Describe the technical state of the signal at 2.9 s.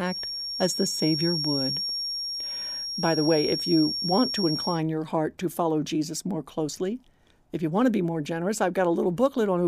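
At 2.9 s a feedback whistle sits under the speech. It runs from 0.0 to 4.84 s, ending just before "your heart to follow". A thin 5.6 kHz tone at one pitch swells and fades slowly in level, a little below the speech. Likely a loudspeaker-to-microphone loop held just short of runaway.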